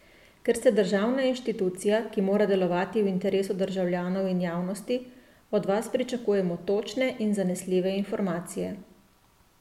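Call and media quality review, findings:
Nothing stood out on listening to this speech recording.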